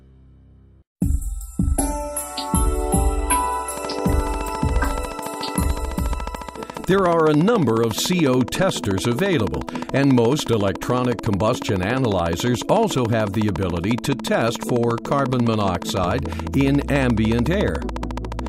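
Likely interference from nearby equipment, or a faulty connection or power supply, injects repeated pulses from 3.77 s to 18.48 s. This train of clicks runs at a regular 14 per second, around two hundred in all, ticking roughly 10 dB above the underlying sound, pauses included.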